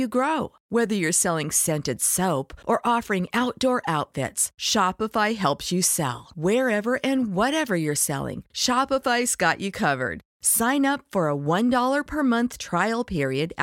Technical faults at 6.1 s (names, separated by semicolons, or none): none